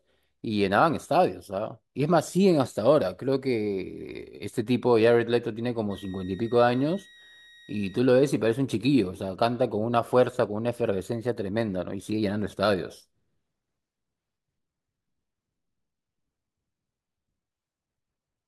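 A switching power supply near the recording chain has dropped into an audible operating mode, and from 5.90 to 8.00 s its switching leaks into the audio as a switching supply whistle. The result is a thin, high tone of roughly 2 kHz that wanders slightly between 1.87 and 1.91 kHz. It sits around 30 dB below the speech and stops after about two seconds.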